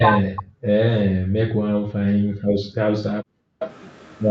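Speech suppressed in double talk, from 0.0 to 0.62 s: the voice dips by around 40 dB, likely because the echo canceller mistook overlapping talk for loudspeaker echo and pulled both down. Background gated by the echo canceller, from 1.05 to 2.77 s: while the far end plays, the room sound drops by about 40 dB for roughly a second and a half, then returns when the canceller releases. A second brief double-talk suppression hits at 3.05 to 3.09 s, a sharp momentary cut in the voice. The background gating returns from 3.37 to 3.6 s, briefly hollowing out the room tone by about 40 dB. Echo leak, from 3.6 to 3.7 s: a faint delayed copy of the voice arrives about 380 ms late, roughly 15 dB below the speech, likely residual loudspeaker pickup the canceller failed to remove.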